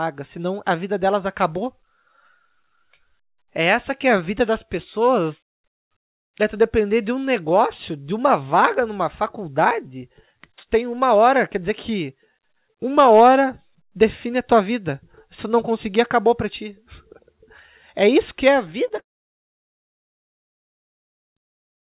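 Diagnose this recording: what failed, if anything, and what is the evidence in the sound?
Two short concealed packet losses hit the network stage at 18.88 to 18.92 s and 18.96 to 18.99 s. About 20 ms of audio went missing each time, and the receiver covered it by extending the preceding sound from its pitch or as shaped noise before blending back. Each one is a brief smear or wobble rather than a clean gap or click. That continuation of the last sound separates it from a dropout or a digital glitch in playback.

The long network dropout follows immediately. From 18.99 s to 21.35 s no usable audio arrives, with about 2.3 s of it heard as silence after the concealment buzz dies away. The sound then resumes without the lost stretch, so nothing is merely delayed. The cause is likely packets failing to reach the jitter buffer over the network. The fade from extrapolated sound into silence, and the missing content on return, separate this from the two brief concealments just before it. 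The call codec path itself, G.711 mu-law at 64 kbps, limits the audio to nothing above 4 kHz throughout.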